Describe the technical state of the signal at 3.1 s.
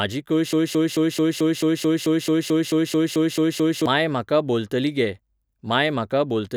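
A broken-record loop runs from 0.53 to 3.86 s, so at 3.1 s the speech is stuck: a 219 ms fragment repeats exactly, back to back, 15 times. The likely cause is a stalled player or stream resending its last buffer, losing the speech meant for that span.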